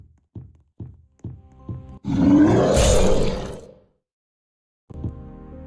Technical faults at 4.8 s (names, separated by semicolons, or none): none